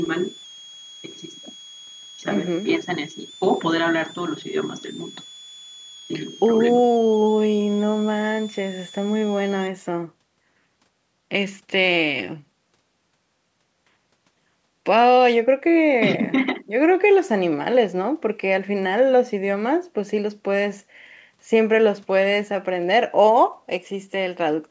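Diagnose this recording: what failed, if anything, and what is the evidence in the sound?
A switching supply whistle sits in the analogue stage. From 0.0 to 9.67 s a high tone wanders between 3.15 and 3.58 kHz, some 20 dB below the speech. The pitch moves because the supply's switching rate shifts with load while it runs in an audible burst mode. The whistle stays under the call processing's 8 kHz upper limit, so it passes straight through.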